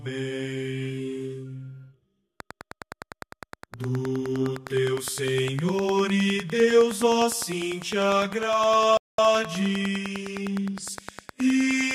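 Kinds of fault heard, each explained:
Train of clicks: From 2.4 s to the end, regular ticks arrive about ten times per second, peaking roughly 10 dB above the sound. Likely interference or a faulty connection.
Playback stall: At 8.97 s the sound cuts out for about 212 ms, then resumes. The player likely ran short of data or was blocked.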